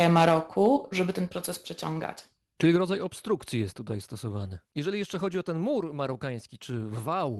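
The speech opens with what is likely microphone overload, from 0.01 to 0.35 s, before "żeby ten proces przeciągać". The input level was set too high. Peaks run about 5 dB past the converter's ceiling, and roughly a twentieth of the samples have their tops sheared flat. The loudest syllables take on a harsh, crackling edge.

At 0.29 s, inside that burst, the level drops suddenly by about 3 dB. This is a microphone volume step-down, likely the call software cutting the device gain after the clipping. Voice and background fall together in one step.

A shorter overload follows from 0.65 to 0.67 s, again before "żeby ten proces przeciągać". Here the peaks are only about 1 dB over. Still, several percent of samples are flattened, and it gives a brief crackle.

The gain steps down three more times. It drops about 4 dB at 1.29 s and again at 2.76 s. The last cut, about 2 dB at 3.78 s, falls between "obstrukcji jest" and "tutaj stosowany". 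Each one is an abrupt drop in loudness, not a gradual fade.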